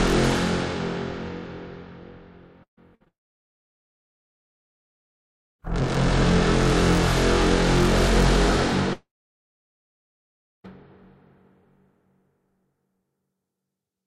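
A recording of everyday sounds, and the trouble clusters around the three-second mark. First there's a burst of packet loss from 2.63 to 2.79 s. The receiver carries the last sound on for a moment, then it fades, and about 110 ms of the roughly 135 ms filled stretch ends up silent. When the sound picks up again, about 140 ms of the original is gone. A second, smaller burst of packet loss hits from 2.95 to 3.02 s: about 53 ms of continued, fading sound, with about 60 ms of real audio skipped. Right after that there's a short concealed packet loss at 3.04 to 3.08 s, where only about 17 ms was patched over by extending the sound before it and blending back in. It's a quick smear rather than a gap, with about 20 ms of audio missing. That runs straight into a long network dropout from 3.08 to 5.61 s, and the same thing happens again from 8.93 to 10.66 s. Both are most likely the network going quiet for a long stretch. 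In each one the receiver briefly extends the last sound and lets it die away, then there's essentially silence: about 2.46 s of the 2.5 s filled in the first, and about 1.58 s of the 1.7 s in the second. When the audio returns, about 2.52 s and 1.72 s of the original are simply lost.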